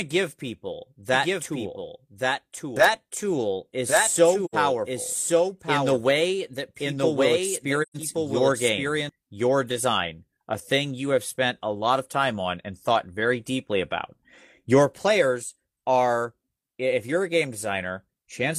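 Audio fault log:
1.13 to 9.09 s, doubled audio track: A second copy of the speech runs about a second behind the first and about 5 dB quieter. It has no room colour and starts and stops abruptly. It is likely a second capture through a slower path, mixed in.
4.45 to 4.54 s and 7.82 to 7.97 s, AAC frame loss with muting: The speech fades out and back in, leaving soft-edged gaps of 85 ms and 128 ms. This fits two and three lost frames, zeroed by the decoder and smoothed by overlapping windows.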